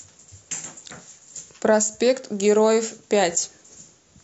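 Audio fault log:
Nothing to log here, as no technical faults turn up anywhere in the speech.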